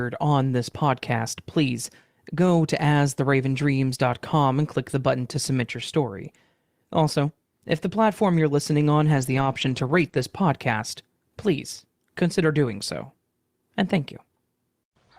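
From 9.13 to 10.07 s, right after "platform you're listening on", the speech goes rough and grainy in repeated short patches. This is lost packets rebuilt from error correction. Many separate packets failed to arrive, adding up to about 480 ms, which fits two dozen or so 20 ms frames. Each one was replaced by the low-bitrate copy carried in the following packet, so nothing drops out, but those stretches sound coarser and noisier.

At 10.09 s a short concealed packet loss follows. About 20 ms of audio was missing entirely, with no backup copy. The decoder extended the preceding sound to fill it and then crossfaded back, which leaves a brief smear or wobble in the speech.

From 10.13 to 10.23 s, just before "podcast please consider doing", the error-correction rebuild happens again over about 60 ms, likely three separate packets. It produces the same brief grainy texture.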